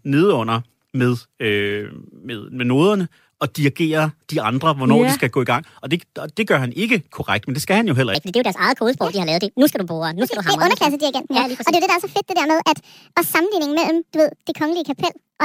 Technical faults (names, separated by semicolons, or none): section at the wrong speed